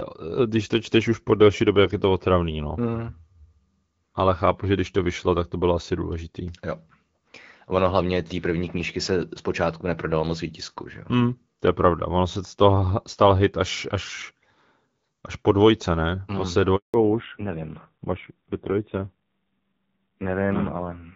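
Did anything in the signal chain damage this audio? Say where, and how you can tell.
Yes. At the network stage, a handover gap silences the speech from 16.76 to 16.94 s. The waveform shows a flat 180 ms hole where no frames arrived while the call switched links.

At the codec stage, a fallback to narrowband starts at 16.94 s and runs to the end. On the spectrogram, the band that earlier reached about 7 kHz under HD Voice now stops dead at 4 kHz, and the speech turns duller and rasp-edged, which fits a low-rate narrowband AMR mode around 5.9 kbit/s.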